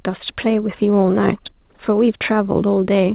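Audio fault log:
No fault; the speech comes through the WebRTC call path with nothing above 4 kHz, as that path allows.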